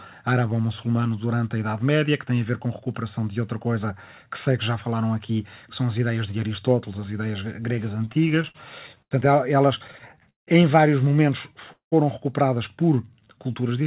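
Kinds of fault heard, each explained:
Repeated stalls (stutter): Late packets kept emptying the jitter buffer. After "as ideias gregas" and before "em vários momentos", the audio drags through short held gaps.
Call audio freeze: Just after "em vários momentos" the sound holds, then drops out for about 120 ms, likely from delayed packets draining the buffer.
Jitter buffer slow-down: Near the end, tiny pitch periods are repeated to rebuild reserve. The audio runs at 87% speed, drawn out but unchanged in pitch.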